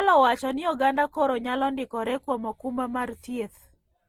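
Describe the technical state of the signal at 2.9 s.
Generation loss is present at 2.9 s and runs through the whole speech clip, so this moment shares it. The sound is swirly, smeared and hollow, with softened attacks, beyond what a single pass at a bitrate like Opus at 48 kbit/s would leave. The likely cause is repeated lossy re-encoding, around four passes, each quantising on a shifted frame grid so noise builds up. The band stops near 20.1 kHz.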